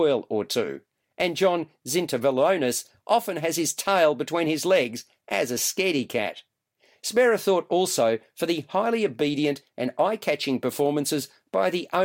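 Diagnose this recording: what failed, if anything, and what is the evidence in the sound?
Nothing failed; no faults heard.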